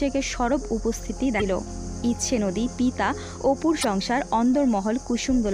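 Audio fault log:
1.37–1.42 s and 3.80–3.85 s, damaged data in a compressed stream: twice, for about 40 ms each, corrupted bytes leave the decoder misreading frames and hunting for the next valid header, so the audio breaks into a short chirp or squawk before decoding locks back on.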